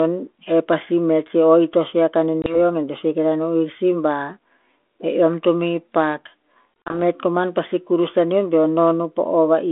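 Speech carried over a G.726 ADPCM telephone link, band-limited to roughly 250 Hz to 3.5 kHz with light codec roughness consistent with 32 kbit/s, shows packet loss on an ADPCM call twice. At 2.42 to 2.57 s a 20 ms hole, about one packet, cuts in hard. At 6.83 to 6.99 s roughly four packets' worth, 80 ms in total with the longest gap 40 ms, drop out across 160 ms. After each gap the decoder's adaptive predictor and step size no longer match the sender's, so the audio resumes with brief distortion before settling.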